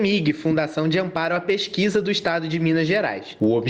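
Gain pumping runs throughout the clip, from start to finish. Each loud sound pulls the overall level down, and the level then swells back up in the quieter gaps, a swing of around 10 dB that gives the audio a breathing, squashed quality with little difference between loud and soft moments. The likely cause is input gain set far too high, with a fast limiter or compressor clamping down on every peak.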